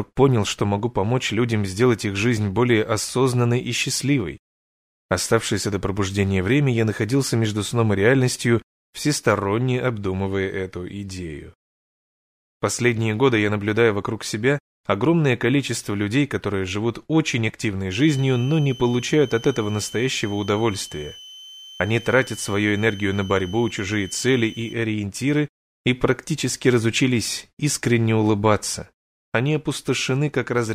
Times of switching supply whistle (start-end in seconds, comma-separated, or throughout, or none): 17.91-24.73